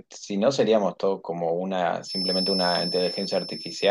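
A speech clip with a feedback whistle from 2.0 s to the end. A thin, steady tone near 5.3 kHz sits a few decibels below the voice, swelling and fading slowly in level. The likely cause is a loudspeaker-to-microphone loop held just short of runaway feedback.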